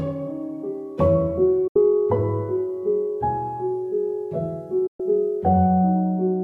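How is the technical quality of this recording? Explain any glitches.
Two short digital broadcast dropouts break up the recording. At 1.67 to 1.76 s and 4.87 to 5.00 s the receiver lost clean frames and muted, with a quick 8 ms fade into silence. The gaps are about 72 ms and 120 ms, which fits a handful of lost frames, and whatever played during them is gone.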